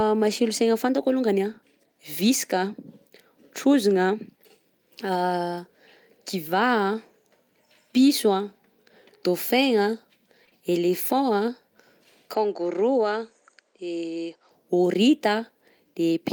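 Lost packet rebuilt from error correction at 3.89 to 3.91 s: a single 20 ms packet was replaced by the decoder's low-bitrate copy, leaving no gap but a briefly rougher, noisier patch.

Short concealed packet loss at 10.45 to 10.49 s and again at 10.49 to 10.53 s: two back-to-back 20 ms holes were filled by extrapolating the preceding sound, giving a short smeared wobble before the audio resumes.

From 12.34 to 14.51 s the sound turns duller, with nothing above 8.7 kHz, a level about 5 dB lower and a faint new noise floor, with no silence at the change. The likely cause is an input switched to a poorer device.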